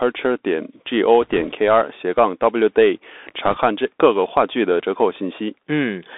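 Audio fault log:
Throughout: Bluetooth CVSD headset codec. The speech is squeezed into a band from about 250 Hz to 3.6 kHz. The damage is plainly audible. Fast, loud peaks outrun the one-bit step, so sibilants grate and a grainy hiss sits beneath everything. This fits a 64 kbps CVSD link.
1.22–1.52 s and 3.46–3.58 s: bit errors on a Bluetooth voice link. Flipped bits bring bursts of rushing crackle, with no sharp clicks. Each bit moves the signal only one step, whose size grows with the speech level, and the error fades quickly. The second burst sounds rougher, near 1.5 percent errors against roughly 1 percent.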